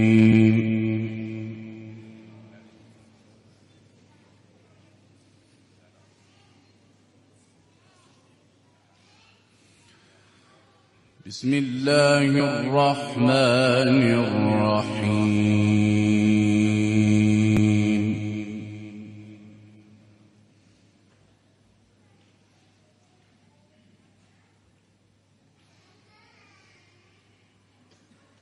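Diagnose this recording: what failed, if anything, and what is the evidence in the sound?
The fault sits in the codec stage: damaged data in a compressed stream. Brief chirps or blips occur at 0.31, 9.76, 12.37 to 12.40, 14.80 and 17.57 seconds, each well under a tenth of a second. Corrupted bytes make the decoder misread frames, lose sync and hunt for the next frame header. A spectrogram would show narrow vertical smears of broadband or oddly tonal energy, and the waveform a short discontinuity where the signal jumps.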